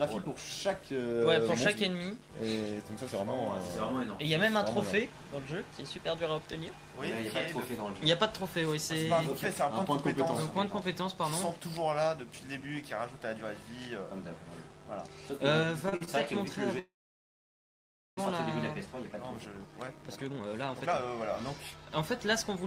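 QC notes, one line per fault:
15.83–16.09 s, repeated stalls (stutter): the sound catches five times in quick succession, the longest hold about 46 ms, with roughly 117 ms of extended audio filling nearly half this stretch. Late packets kept draining the jitter buffer, so the receiver repeated the last sound each time; nothing is lost, only dragged.
16.79–18.19 s, call audio freeze: the sound halts and a brief fading continuation gives way to about 1.26 s of silence, roughly 1.38 s inserted in all, before resuming exactly where it stopped. Likely packets held up in transit emptied the buffer, adding delay without dropping content.
18.86–22.64 s, jitter buffer speed-up: the audio plays at about 125% speed with pitch unchanged and sounds hurried. After the long hold, the buffer was carrying excess delay, so the receiver repeatedly trimmed pitch-period-length slices, removing around a second of material to catch up.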